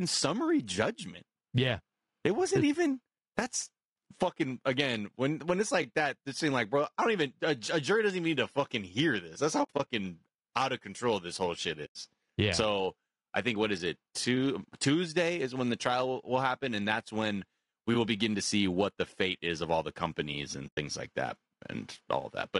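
From start to finish the speech sounds rough and grainy. Noise fills the gaps between the voice's harmonics, and the top band sounds thin and synthetic. This is likely low-delay AAC compression, AAC-ELD at a low bitrate around 32 kbps. Its short frames resolve pitch poorly.

AAC frame loss with muting appears three times. From 9.63 to 9.87 s, after "hear this that's how", brief holes are scattered over about 240 ms, the longest run about 70 ms. From 11.85 to 11.96 s, between "control this whole shit" and "yeah so i think", the sound drops out for 100 ms. From 20.67 to 20.78 s, between "of all the companies" and "like that", another 100 ms hole follows. Each time the decoder zeroed the missing frames. Overlapping windows fade the sound down and back, leaving soft-edged gaps.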